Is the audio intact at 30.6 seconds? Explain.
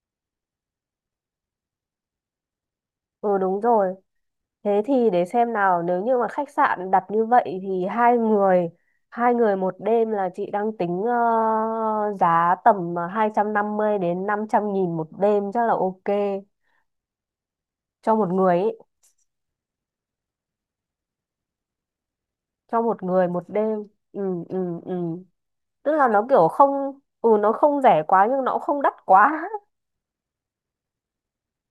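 No. Sample clock jitter runs throughout, including 30.6 s: timing errors of under a microsecond leave a faint hiss around 50 dB below the speech that rises with loud, bright sounds. Unlike steady background noise, it disappears in pauses.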